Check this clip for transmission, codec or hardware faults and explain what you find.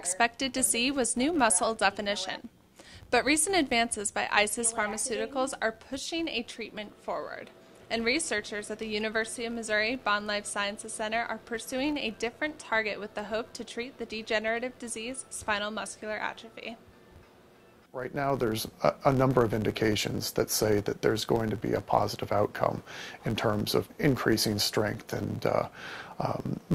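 One fault runs through the whole clip: a filter restarted on every block. A processing filter drops its internal state at each block boundary and starts again from silence, so every block opens with a small transient. These repeat at about 86.1 Hz, which fits a 512-sample block. The result is a steady low buzz under the sound that grows louder and softer with the signal's level rather than staying fixed.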